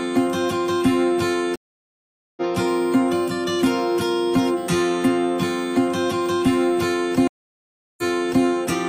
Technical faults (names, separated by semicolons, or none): USB whine; stream reconnect